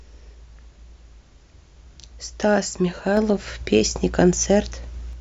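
A sudden gain jump hits this speech at 3.17 s, lifting level by about 4 dB until 5.13 s, likely a digital gain step applied without any ramp.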